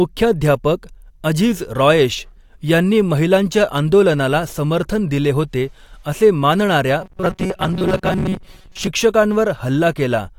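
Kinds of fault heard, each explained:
Robotic sound from repeated short buffers: a rigid metallic 188 Hz buzz, likely from a looping buffer of about 5 ms replacing roughly half the audio, shown on a spectrogram as evenly spaced harmonic stripes.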